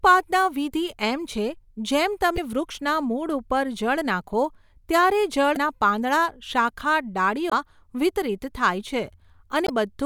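Speech with four short bursts of damaged data in a compressed stream, at 2.34–2.38, 5.53–5.57, 7.49–7.53 and 9.65–9.70 s. Each lasts about 45 ms and sounds like a chirp or blip, where corrupted bytes threw the decoder out of frame sync until it found the next header.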